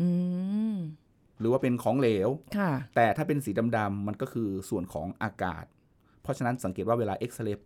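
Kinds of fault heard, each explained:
The speech signal shows no audible technical fault at any point, with level, timing and bandwidth holding steady throughout.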